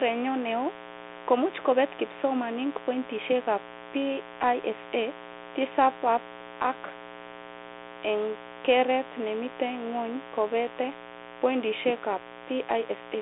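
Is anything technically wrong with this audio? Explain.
Yes, two things, both running the whole way through.

There's mains buzz, a raspy 60 Hz buzz sitting fairly loud under the speech, from switching spikes leaking in and spraying harmonics well up the spectrum.

The speech also went through a Bluetooth CVSD headset codec, consistent with a 64 kbps link. It's squeezed into roughly 300 Hz to 3.6 kHz with nothing above 3.8 kHz, and the one-bit step tracking audibly scratches sibilants and leaves a grainy hiss.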